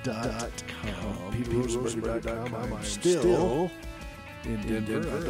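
Throughout, a doubled audio track: a second full-strength copy trails about a fifth of a second behind, likely from a slower capture path, giving repeated onsets offset evenly on the waveform.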